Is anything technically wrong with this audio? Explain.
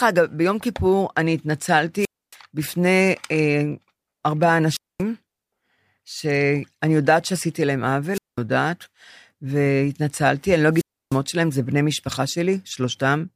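Yes. The speech has a wireless microphone squelch dropout four times: 1.99 to 2.36 s, 4.69 to 5.03 s, 8.13 to 8.38 s, and 10.72 to 11.20 s. Each time the radio link from the transmitter weakens. Hiss rises briefly. Then the receiver's squelch shuts the output off, leaving near silence for about 0.28, 0.23, 0.20 and 0.31 s respectively. The speech then cuts back in.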